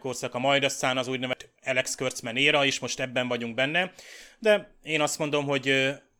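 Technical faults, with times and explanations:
1.33 s, CD skip: the speech cuts out for a couple of milliseconds with a short tick, then resumes from a different point on the disc. The laser has jumped to another turn of the spiral, so the audio continues out of sequence.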